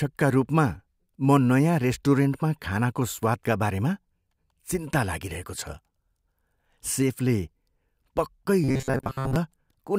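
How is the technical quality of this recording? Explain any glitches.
The recording has one glitch, near the end. From 8.64 to 9.36 s, robotic sound from repeated short buffers: the speech becomes a rigid metallic buzz near 134 Hz, likely from a 7.5 ms chunk being replayed for most of that stretch. Unlike a plain dropout, the sound never goes silent.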